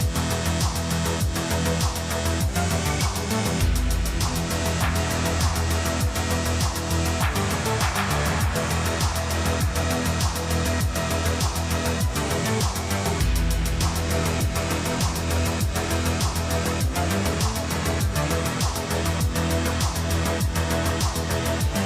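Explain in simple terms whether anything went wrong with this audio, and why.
Nothing went wrong here that a listener can hear; the audio holds steady throughout with no audible faults.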